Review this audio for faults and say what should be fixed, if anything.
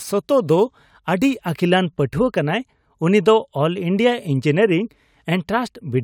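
Crude rate conversion from 0.0 to 1.5 s: samples are dropped with no filter, consistent with 48 kHz to 44.1 kHz, leaving inharmonic fizz about 30 dB below the speech, visible as spurious spectrogram lines shadowing bright sounds. Prevent it by resampling with a proper band-limited polyphase converter.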